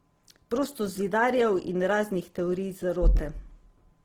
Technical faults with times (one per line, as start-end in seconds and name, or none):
0.00-4.05 Opus compression